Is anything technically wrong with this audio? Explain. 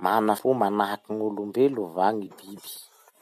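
Yes. Damaged data in a compressed stream causes brief glitches at 0.37 s and from 2.25 to 2.27 s. The decoder misreads corrupt frames and resyncs.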